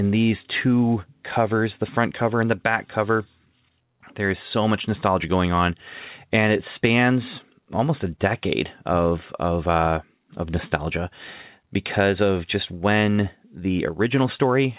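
No technical faults are audible.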